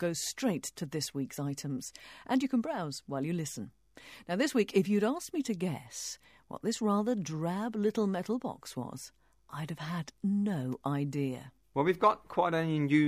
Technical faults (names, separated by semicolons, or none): none